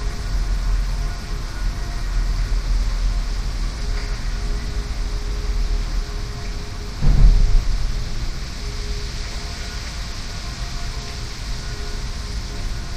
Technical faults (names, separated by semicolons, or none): none